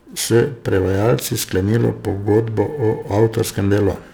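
Periodic clock jitter runs through the whole speech clip. Interference wobbles the converter's clock at around 1.5 kHz. Each component of the speech gains sidebands spaced that far above and below it, strongest on high frequencies. It sounds rough and metallic, and disappears in pauses.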